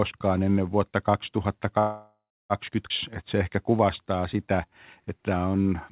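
At 1.79 s the sound stalls and doesn't pick up again until 2.53 s, a call audio freeze. The likely cause is packets getting held up in transit so the jitter buffer ran dry. The receiver keeps stretching out the last bit of sound as a fading buzzy hiss, and the final 0.28 s or so drops to silence. When things resume, it carries on right where it left off. So nothing's lost, but the whole call now sits about 0.7 s later.

Just after, around 2.89 to 2.93 s, there's a skip ahead. A chunk of roughly a third of a second is simply gone, probably discarded as the buffer shed that built-up delay. Only about 12 ms of patch-up sits between the two sides. It sounds like an abrupt jump forward, with the audio on either side butted almost straight together.

Then from 3.24 s to 5.71 s you get a jitter buffer slow-down. The buffer was topping itself back up by repeating single pitch periods and snippets of pauses over and over. 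That adds about 244 ms, so this stretch plays at roughly 90% speed with the pitch unchanged. Sounds get drawn out and there's a faint warble here and there. The bandwidth stops at 4 kHz throughout, which fits a G.711 mu-law call path.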